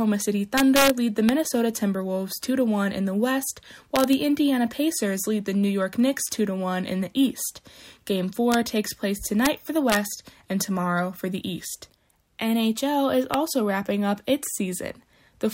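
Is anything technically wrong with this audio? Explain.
Yes. Integer overflow cracks through the audio at 0.58–0.90 s, 1.29 s, 3.96–4.13 s, 8.52–8.54 s, 9.45 s, 9.90–9.96 s and 13.34 s. On each peak the summed level goes past the largest integer value, at most about 2 dB over, and instead of stopping at the limit it wraps to the opposite sign. The waveform jumps across the full range, producing violent cracks that are far harsher than clipping, which only flattens the peak.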